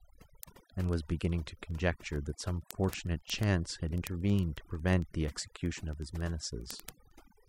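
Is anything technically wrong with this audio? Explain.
Yes, there are two faults. Overdone noise removal runs throughout: bands near the noise estimate are cut, leaving twinkling specks in near-silence and taking quiet parts of the speech with them, unlike broadband hiss. Word clock ticks occur from 0.12 s to 7.48 s, about every 50 ms. An unlocked clock drifts roughly 500 ppm, dropping or repeating one sample each slip. Their steady rhythm separates them from random crackle.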